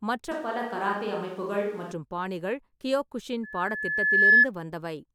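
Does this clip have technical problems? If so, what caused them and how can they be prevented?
Yes. From 0.32 to 1.92 s there is a switch to a distant microphone, likely because the close microphone's feed dropped and a farther one took over. The speech turns suddenly roomy and hollow with thinner bass, at much the same level, and room noise sits roughly 30 dB below it. Monitor the close microphone's signal during recording and keep a backup close microphone running.

From 3.43 to 4.47 s there is a loudspeaker feedback squeal. A microphone picked up the loudspeaker it feeds, and the loop's gain exceeded one at 1.7 kHz. That tone swells over about a second to roughly 15 dB above the program. Keep microphones behind and away from loudspeakers, and lower the gain or notch out 1.7 kHz.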